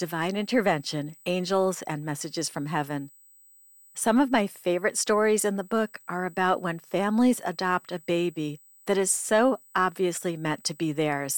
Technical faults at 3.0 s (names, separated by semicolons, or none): USB whine